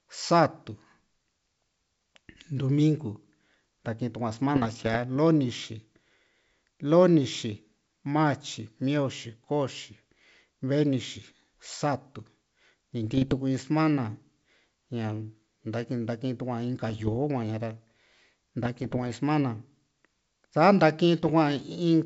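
Speech carried over a G.722 wideband link shows bit errors on an ADPCM link in five bursts, at 4.56–4.97 s, 13.04–13.35 s, 16.90–17.20 s, 18.65–19.11 s and 21.19–21.31 s, heard as pops and rough crackle with brief level jumps. Each flipped bit, at a rate of well under one percent, throws the decoder's step size and predictor off, so the damage rings on for a few milliseconds. Unlike packet loss, the sound never drops out or repeats.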